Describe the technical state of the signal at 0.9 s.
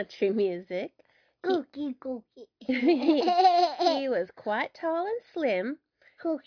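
Nothing is wrong at 0.9 s: the signal there is intact, with no dropout, click, distortion or other fault to be heard.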